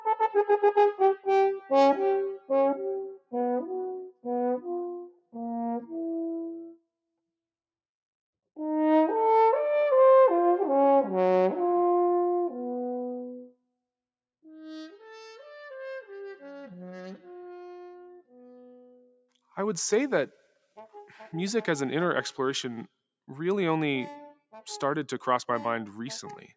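Throughout, a noise suppressor built for speech is acting on this material. It treats sustained content and decay as noise, so the level swings by roughly a few decibels as it clamps and releases, giving a pumping, thinned character. Sounds cut by the noise suppressor stand out at 0.93 to 1.28 s, 1.56 to 1.71 s, 2.32 to 2.50 s, 3.03 to 3.33 s, 4.04 to 4.25 s, 5.04 to 5.35 s and 19.02 to 19.21 s. Drops reach about 18, 14, 18, 19, 19, 19 and 9 dB respectively, with held portions sinking and tails truncated.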